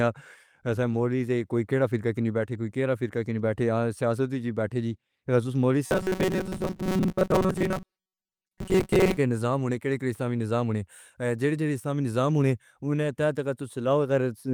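Robotic sound from repeated short buffers runs from 5.87 to 9.17 s. The speech becomes a rigid, metallic buzz at 188 Hz, likely because audio arrived too slowly and roughly 5 ms fragments were replayed in place of most of the missing signal.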